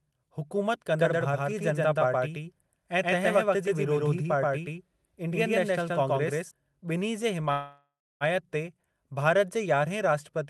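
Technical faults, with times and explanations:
0.99–6.51 s, doubled audio track: a second full-band copy of the speech runs roughly 150 ms behind the original at about the same level, giving a hard, slap-like echo with no decay or room colour. It starts and stops abruptly at the range edges. The likely cause is the signal being captured twice, once through a slower path, or an edit leaving two copies out of step. The fixed offset and equal level point to a duplicate rather than an acoustic reflection.
7.51–8.24 s, call audio freeze: the speech halts and the last sound is stretched into a fading buzz or hiss that falls to silence for about 300 ms of the 693 ms filled. Speech then resumes exactly where it stopped, so nothing is lost but everything after is 693 ms later. This is likely packets held up in transit while the jitter buffer ran dry. The rest of the call path sounds like Opus coding, with content topping out near 12 kHz.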